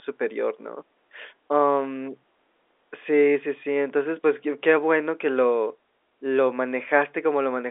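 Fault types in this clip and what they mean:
No faults found: the speech carries the narrow 300 Hz to 3.6 kHz band of G.711 A-law telephone coding with nothing above 3.8 kHz, which is normal behaviour for a 64 kbps line.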